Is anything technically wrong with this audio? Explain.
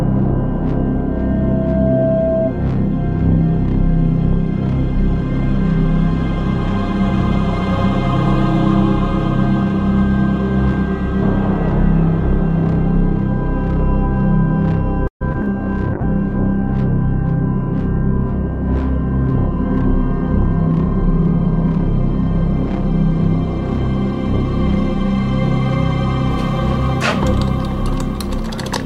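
Yes, there are three problems, all in the second half of the clip.

From 15.07 to 15.49 s there is repeated packet loss, which gives a robotic sound. Four short holes follow each other, the longest 132 ms. The receiver patches each by stretching the last sound, and about 42% of the stretch is covered this way, so the audio turns choppy. On a waveform you would see repeated, smeared copies of the same cycle. A spectrogram would show flat, comb-like bands where the detail should change.

From 15.93 to 22.01 s a call bitrate drop takes hold. The encoder's rate falls from 96 to 17 kbps and stays at its lowest for about 4 s. With so few bits it codes coarsely and narrows the audio band from 20 kHz to 12 kHz. The sound becomes rougher and duller. On a spectrogram the energy above 12 kHz is cut off sharply, and the area below looks blotchy and quantised.

From 20.43 to 22.13 s, overlapping the end of the low-bitrate stretch, there is a jitter buffer speed-up. 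The receiver had built up excess delay and trimmed it by deleting short pitch-period pieces, around 70 ms in total. Playback runs at about 104% speed with the pitch unchanged, so the tempo is only slightly faster. A waveform shows periodic cycles quietly removed. A spectrogram keeps the same pitch lines, packed a little tighter in time.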